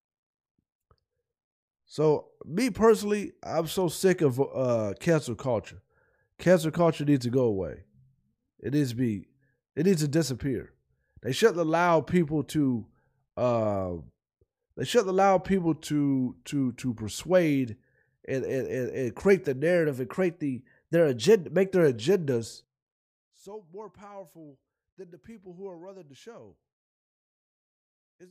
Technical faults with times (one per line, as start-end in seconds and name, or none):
15.66-17.25 drift correction step
19.87-21.70 drift correction step
22.64-28.30 one channel inverted